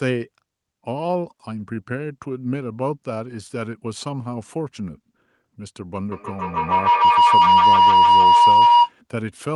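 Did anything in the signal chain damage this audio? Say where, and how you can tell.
Yes, a feedback howl in the call path from 6.12 to 8.97 s. A roughly 1 kHz tone pulses about every 150 ms and climbs to about 12 dB over the speech as the microphone-to-loudspeaker loop gains.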